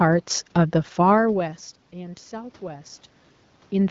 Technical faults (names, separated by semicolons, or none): automatic gain rising